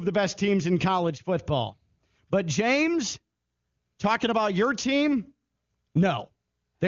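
Speech clip, with nothing technically wrong to point to, its AMR wideband (HD Voice) coding at the top 23.85 kbit/s rate leaving no audible damage.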